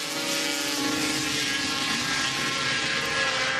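At 0.77 to 0.79 s the audio skips ahead. Roughly 0.7 s of sound is dropped, and playback resumes from material that was already queued, so the two sides of the cut are butted together with no fill in between. A stretch like this is lost either in transit or when an overfull jitter buffer discards it. Overall latency falls by the same amount, and the listener hears an abrupt forward jump.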